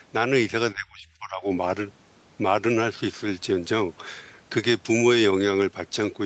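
Between 0.74 and 1.45 s speech dips by up to about 20 dB, likely speech suppressed in double talk: shrunken waveform, faded spectrogram.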